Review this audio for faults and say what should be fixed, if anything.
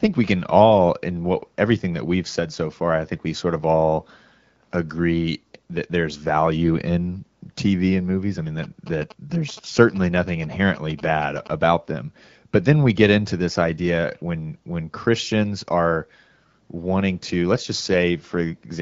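From 8.63 to 11.48 s, after "and movies I mean", galloping ticks and 217 Hz buzzing sit about 20 dB below the speech: GSM signalling bursts from a nearby 2G phone, rectified by the audio circuitry. Keep phones away from the recording chain or in flight mode during takes.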